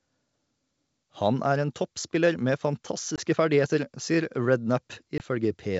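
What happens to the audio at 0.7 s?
Nothing goes wrong at 0.7 s: the speech comes through intact, carried by 64 kbit/s G.722 wideband coding with at most faint codec damage.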